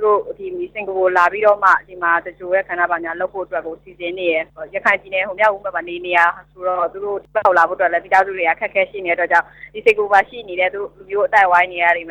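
No technical faults can be heard anywhere in this audio.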